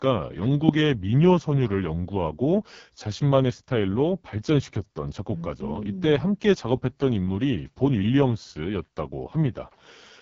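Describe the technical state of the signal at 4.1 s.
At 4.1 s the speech is running through the AMR wideband (HD Voice) codec. That codec is present for the whole clip, so this moment is no exception. The damage is heavy, and the sound fits the codec's lowest rate of around 6.6 kbit/s. At that rate the pulse-driven vocal tract model can't track the voice well, which leaves it rough and raspy. Above about 6.4 kHz there's only shaped noise, and the band ends near 7.4 kHz.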